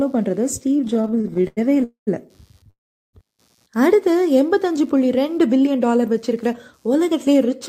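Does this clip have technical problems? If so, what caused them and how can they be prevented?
Yes. Four kinds of fault can be heard.

Computer activity noise runs through the whole clip: a faint buzz made of pulses at roughly 100 per second, sitting very low, around 45 dB below the speech. It comes from processor or graphics load disturbing the audio circuit's shared ground, so it follows the computer's work rather than the speech. On a spectrogram it appears as faint evenly spaced vertical ticks or a comb of harmonics, visible in pauses. Preventing it means using a USB or external audio interface, or a ground-loop isolator, to keep the microphone path away from the computer's ground.

Repeated stalls (stutter) run from 0.77 s to 1.84 s. About twenty short holds break up the speech, the longest lasting 91 ms, and together they stretch the passage by about 300 ms, roughly 28% of the span, with nothing lost. 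Packets kept arriving late, the jitter buffer kept running dry, and the receiver prolonged the last sound each time. A spectrogram shows repeated smeared, frozen columns, and the waveform shows flattened, repetitive stretches. A steadier network connection or a larger minimum jitter buffer would prevent this.

Call audio freezes follow at 1.84 to 2.09 s and 2.70 to 3.15 s. In the first, the last sound is held and fades into about 120 ms of silence. In the second, the fade leads into about 380 ms of silence. Each inserts a gap (233 ms, then 434 ms) before the speech resumes where it stopped. The likely cause is packets being held up in transit. On a waveform each appears as a decaying tail and then a flat line. Prioritising call traffic, for example with QoS or wired rather than Wi-Fi, prevents these.

Jitter buffer speed-up runs from 5.29 s to the end. The speech plays about 6% fast at unchanged pitch and sounds slightly hurried. 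After the delays, the receiver held too much buffered audio and trimmed it by cutting many short pitch-period slices, about 150 ms in total. The spectrogram shows harmonics at normal spacing but compressed timing, and the waveform has small splice points between periods. Avoiding the upstream delay bursts, or letting the buffer drain more gently, prevents this.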